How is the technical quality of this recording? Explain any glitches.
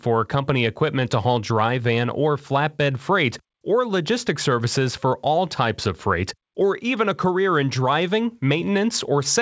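The technical quality of this recording is sound, with no glitches to explain.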